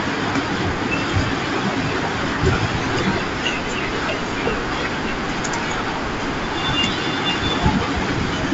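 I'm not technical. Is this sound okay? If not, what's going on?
Yes, this speech sounds fine, carried over the sort of wideband phone line that keeps things fairly bright while dropping the very highest frequencies, with perhaps a faint hint of hiss up top, and nothing in it is going wrong.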